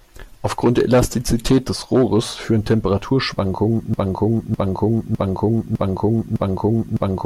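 From 3.94 s to the very end, the same fragment of about 0.61 s of speech plays five times back to back, each copy identical, a stuttering broken-record loop that never resolves into new material. Whatever should have followed in those last seconds is simply absent. The likely cause is a stall in the player, encoder or stream that left it resending the last chunk it had buffered instead of fresh audio.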